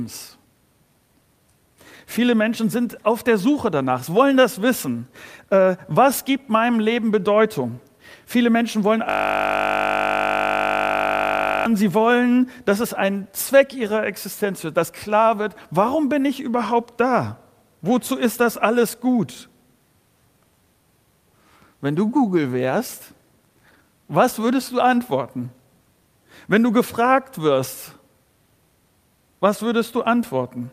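From 9.10 to 11.66 s the audio locks into a system hang loop. The system stalled while the playback hardware kept replaying one 20 ms buffer, 128 times over. The exact repetition produces a steady 50 Hz buzz, not the audible stutter a longer loop would give.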